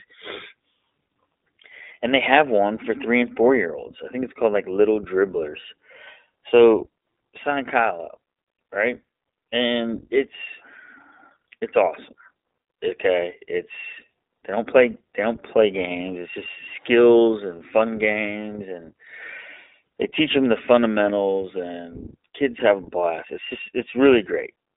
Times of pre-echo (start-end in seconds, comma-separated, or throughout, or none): none